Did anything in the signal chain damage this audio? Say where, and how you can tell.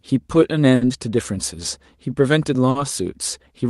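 Yes. Clock drift between sender and receiver runs through the whole clip, at the network and jitter-buffer stage. The sender's clock is about 4 percent slower than the receiver's, so the buffer keeps draining and the receiver must keep filling gaps to stay in step.

Repeated timing corrections run from 0.06 to 2.60 s, where the sound plays at 98 percent speed. Roughly 50 ms in total is added in small, unevenly spaced stretches.

Two short stalls from a late packet occur at 0.75–0.84 s and 2.70–2.78 s. In each, a packet arrived late, the buffer ran empty, and the receiver held the last sound for 60 ms and then 50 ms before resuming where it left off. Nothing is lost, but each held sound lingers with a slight buzz or dip.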